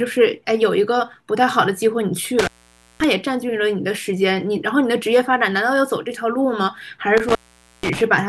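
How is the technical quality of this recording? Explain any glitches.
The speech drops out twice from an intermittent contact. Around 2.39 to 3.04 s and 7.17 to 8.01 s, a loose connection opens for about 0.5 s, cutting the sound with crackles at the edges.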